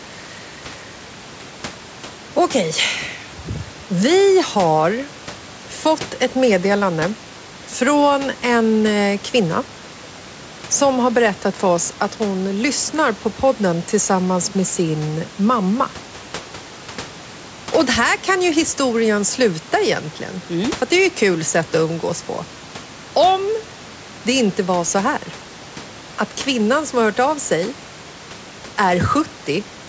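No technical faults are audible.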